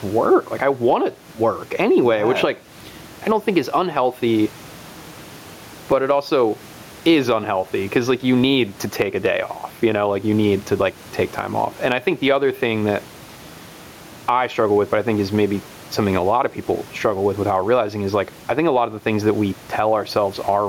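Gain pumping runs through the whole speech clip. The room noise sits about 33 dB below the voice. The gain swings by around 10 dB. The likely cause is gain set far too high, with a fast limiter clamping down.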